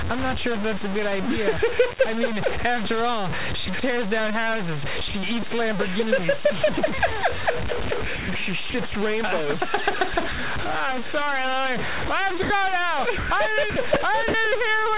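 Right from the start and all the way through, the sound has a coarse, grainy distortion that moves with the signal, with noise sitting only about 5 dB under it. That's likely low bit depth without dither, something like 3 bits truncated, so the quietest parts sputter or fall away, on top of the call path's 4 kHz ceiling.

At 3.66–3.68 s and 5.08–5.14 s the sound briefly gives way to steady hiss before returning. That's likely sound dropped by the voice detector, with comfort noise filling 20 and 60 ms gaps. The same thing happens at 12.42–12.5 s, an 80 ms hole.

Over 8.16–8.94 s, 10.14–10.38 s and 13.18–14.34 s it gets choppy. That's likely sound chopped by the voice detector toggling repeatedly, with comfort noise replacing about 180, 80 and 260 ms in total.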